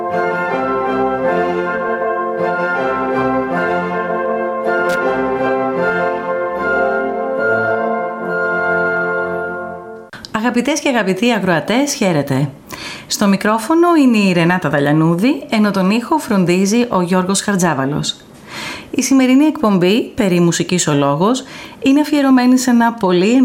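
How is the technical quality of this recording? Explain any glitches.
A single glitch affects the recording. From 4.89 to 4.97 s there is loose connector crackle: a worn or dirty contact briefly makes and breaks, chopping the signal. The result is a short, irregular scratchy burst lasting about 80 ms. Its ragged, uneven texture sets it apart from a clean digital dropout or a single click.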